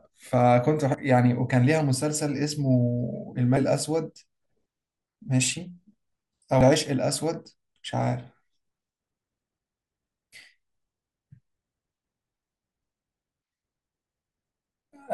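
A speech clip with three brief glitches from damaged data in a compressed stream, at 0.94, 3.57 and 6.61 seconds. Each is a tiny chirp, squawk, click or short hole. Corrupted bytes made the decoder misread those frames and lose sync until it found the next frame header.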